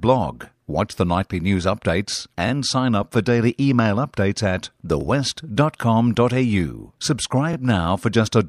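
Short stutters break into the speech at 5.01 to 5.03 s and again at 7.53 to 7.56 s. In each, about 25 ms of audio plays twice. These are overlapping chunks: the audio was handled in 2.5 s blocks, and each block began 25 ms before the previous one ended.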